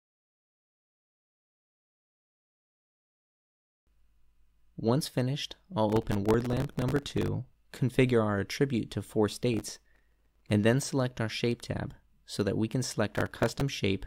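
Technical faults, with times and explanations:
5.90–7.28 s, 9.54–10.50 s and 13.15–13.61 s, processor overload crackle: three bursts of gritty tearing ride on top of the sound, each stopping once the load eases. The processor is falling behind on very short buffers, and the grain points to blocks of only a millisecond or two. It misses dozens of deadlines in a row, and each miss replays a scrap of stale audio with hard edges, so the run of clicks blurs into crackle.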